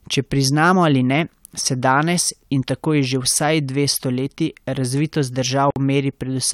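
Speech, with one gap at a join of encoded pieces. At 5.71 s the sound drops out for about 55 ms, ending at 5.76 s. The edges are smeared by the codec. The speech resumes where it stopped. Separately encoded pieces were joined untrimmed, leaving encoder delay and end padding in place.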